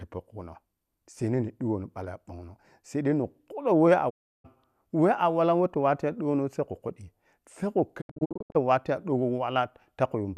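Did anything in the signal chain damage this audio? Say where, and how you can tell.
Yes, a digital broadcast dropout at the reception stage. At 4.09 to 4.46 s the speech fades to silence within 20 ms and returns later. From 8.00 to 8.57 s it breaks into scattered short holes, the longest 72 ms. Failed frames were muted, and their audio is gone.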